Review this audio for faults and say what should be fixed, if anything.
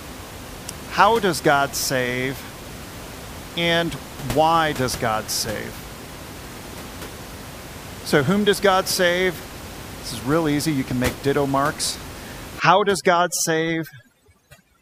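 Overdone noise removal affects the final stretch, from 12.60 s to the end at 14.82 s. Frequency bands sitting near the noise estimate are pulled down hard, leaving near-silence with twinkling specks, while room noise elsewhere sits about 15 dB below speech. Prevent it by setting the noise reduction more gently and checking that quiet speech survives.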